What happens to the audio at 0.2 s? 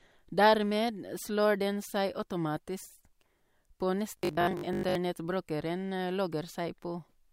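Nothing goes wrong at 0.2 s; the speech there plays through intact, with no dropout, click or distortion to be heard.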